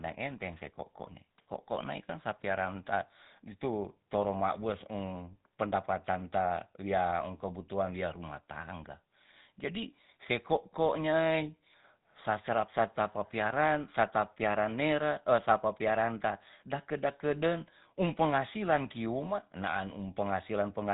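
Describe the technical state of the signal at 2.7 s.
At 2.7 s the speech carries GSM full-rate codec damage, present throughout the clip. Pulse-driven vocal-tract modelling, consistent with the 13 kbps coder, gives a plainly buzzy, gravelly roughness. A spectrogram shows a hard ceiling at 4 kHz with nothing above it.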